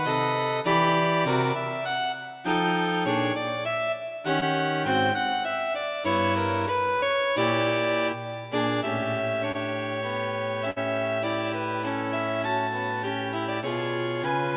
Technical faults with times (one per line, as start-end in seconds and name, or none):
4.40-4.43 short concealed packet loss
6.99-7.04 short concealed packet loss
9.52-9.56 short concealed packet loss
10.70-10.78 burst of packet loss